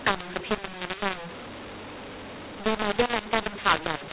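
The telephone speech was coded with G.711 mu-law but decoded as A-law, a mu-law and A-law mix-up that runs through the whole clip. Because the two logarithmic scales assign the same 8-bit codes to different levels, samples come back at the wrong amplitude, some too loud and some too quiet. The speech sounds harsh and distorted throughout, and the quietest moments are lifted well above silence, so pauses fill with noise.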